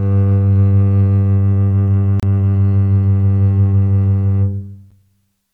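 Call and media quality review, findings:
Gap at a join of encoded pieces: music drops to silence 2.20–2.23 s (about 31 ms) and at 4.91 s (about 11 ms), with smeared edges. The sound resumes exactly where it stopped, so nothing is lost, unlike packet loss. Encoder start delay and last-frame padding were left untrimmed when separately encoded segments were joined.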